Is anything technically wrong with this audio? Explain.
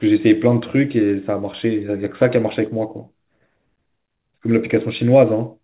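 No, nothing's wrong here: the speech comes through a normal call path, with nothing above 4 kHz, as you'd expect from G.711 mu-law on a standard phone-quality link.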